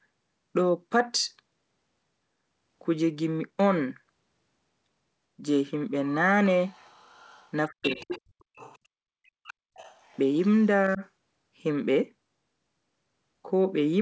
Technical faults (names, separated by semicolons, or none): other side's voice leaking through; speech suppressed in double talk